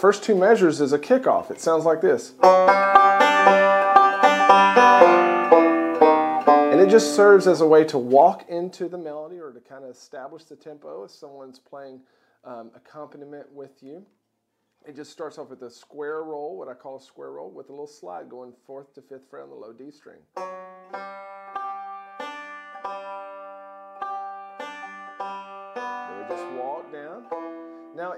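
Zipper noise runs from 8.19 to 9.37 s, while the level drops by roughly 20 dB. Instead of gliding, the gain moves in 1 dB jumps at around fifteen steps a second, with no smoothing between them. Each jump puts a small discontinuity into the waveform, so a fast, rasping tick rides on the sound for the full 1.18 s of the fade.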